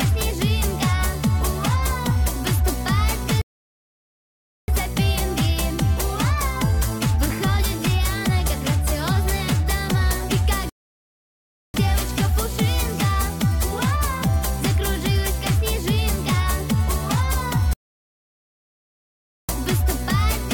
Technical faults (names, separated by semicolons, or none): rebuffering stall